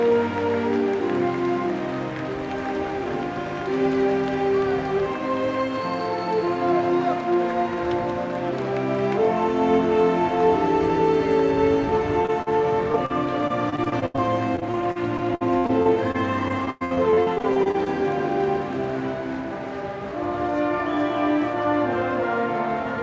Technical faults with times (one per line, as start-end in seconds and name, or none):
12.22-12.48 short concealed packet loss
12.92-13.12 short concealed packet loss
13.48-14.20 repeated packet loss (robotic sound)
14.56-17.88 repeated packet loss (robotic sound)